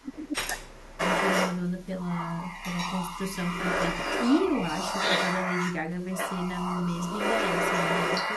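From 0 to 1.01 s, the speech drops sharply, by around 30 dB at its deepest, for roughly a full second. This is speech suppressed in double talk. Both sides were likely talking at once. The echo canceller could not tell the talker from the loudspeaker echo, so it turned everything down.

From 0.97 to 5.75 s, a delayed copy of the speech follows it by 243 ms. From 5.97 to 8.36 s, a second copy trails by 253 ms. Both copies are roughly as loud as the speech. This is echo leak. A loudspeaker's sound likely reached the microphone, and the canceller failed to remove it.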